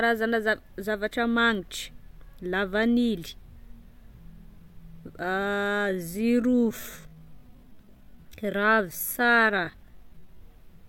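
A speech clip with a time-stretched section from 5.47 to 10.41 s: the pace drops to about 0.66x with pitch unchanged, so the speech drags, likely from stretch software repeating short slices.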